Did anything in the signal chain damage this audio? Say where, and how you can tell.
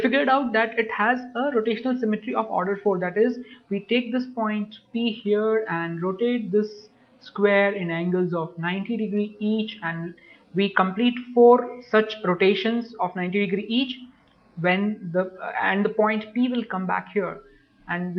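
No damage in the chain.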